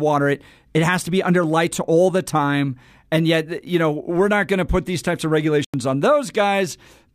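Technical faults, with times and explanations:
5.64–5.74 s, corrupt frame muted: the speech drops abruptly into a silent hole of about 94 ms, consistent with a single compressed frame. Bit errors made the decoder reject it, and the player substituted silence, so the gap opens instantly while timing afterwards stays intact.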